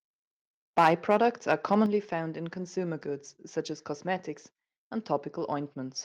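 From 0.78 to 1.75 s the speech shows microphone overload: peaks run about 7 dB past the converter's ceiling and roughly one or two percent of samples are flattened, likely from an input gain set too high. The result is a harsh crackle riding only on the loudest syllables, unlike a level change, which would alter everything.

Microphone volume stepped down at 0.87 s, by about 3 dB, and again at 1.86 s, by about 6 dB, likely the call software reacting to that overload by cutting the device's input gain. Each is a clean, sudden drop in voice and background together, with no added distortion, which distinguishes it from the clipping itself.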